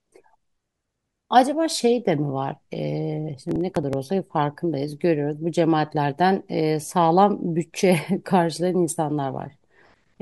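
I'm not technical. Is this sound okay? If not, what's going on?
No. From 3.49 to 4.11 s, processor overload crackle tears the speech. The overloaded computer skips tiny slices of audio, likely about 5 milliseconds each.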